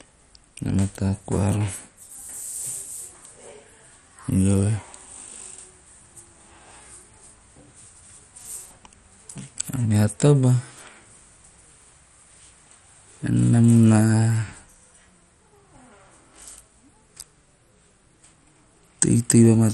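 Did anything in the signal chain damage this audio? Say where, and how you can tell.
Yes. At the codec stage, likely heavy MP2 compression starved sub-bands of bits, leaving the speech dull, gurgling and granular, with nothing above 13.8 kHz.

At the buffer, clock drift buffer slips, likely from clocks around 150 ppm apart, cause a regular click every 1.28 s from 0.33 to 19.48 s.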